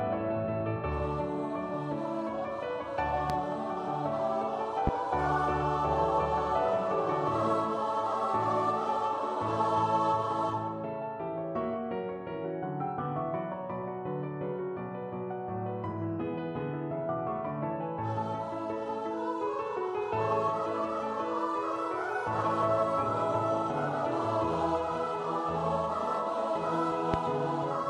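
Three loud pops cut through the audio at 3.30 s, 4.87 s and 27.14 s, each a single thump about 30 ms long that stands well above the surrounding sound, the first slightly less so. They're likely voltage spikes from a plug, switch or static discharge. Unlike a dropout, the sound continues unbroken beneath each pop.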